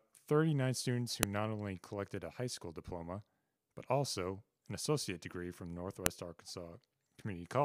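Separate WAV pieces were joined without stripping their headers, so the file header played as audio at 1.23 s and again at 6.06 s. Each time, the few dozen bytes of header data are read as sample values, producing a sharp, loud click. The snap cuts across the speech regardless of what is being said, marking the point where one piece ends and the next begins.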